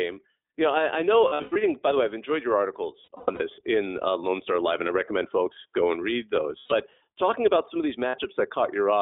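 The speech runs through the iLBC codec for the whole clip, in a mode that fits 15.2 kbps with 20 ms frames. The line is cut to roughly 300 Hz to 3.5 kHz, so the voice sounds thin and telephone-like. Because each frame's excitation is coded on its own at this low rate, the codec damage is plainly audible as a rough, slightly synthetic grain.

Lost iLBC frames then open short holes. Each time, the decoder fills the missing audio by repeating the last pitch cycle blended with noise, which comes across as a held, buzzy vowel.

From 1.28 to 1.57 s, just after "know I I know", about 220 ms goes missing in scattered bursts, the longest about a tenth of a second. From 3.04 to 3.42 s, after "way I've enjoyed your" and before "in uh", another 220 ms is lost in bursts spread over 360 ms. From 6.58 to 6.73 s, a 120 ms loss produces a brief held, buzzy drone. From 8.08 to 8.18 s, just after "about some of these", a 60 ms loss leaves a quick buzzy blip.

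Because iLBC frames stand alone, the voice snaps back to normal almost immediately after each loss.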